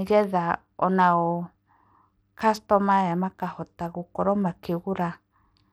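From start to finish, the speech carries plainly audible coding damage. The treble thins out and flickers, and a gritty, grainy noise clings to the sound. The likely cause is Bluetooth SBC compression. SBC splits the signal into a handful of wide bands and shares out bits with no model of hearing. Here the budget is tight, which fits a rate of about 96 kbps. The upper bands starve, and the rest are quantised coarsely, leaving aliasing and grit.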